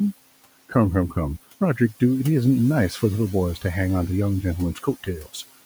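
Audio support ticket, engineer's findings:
Noise suppressor artifacts throughout. Room noise, about 19 dB below speech, is pulled down about 16 dB between words and returns under speech. Component: per-band noise suppression.

Speech cut by the noise suppressor, 4.74 to 5.36 s. Roughly 300 ms of quiet speech was classed as noise and attenuated up to about 17 dB, so it sounds swallowed and faint.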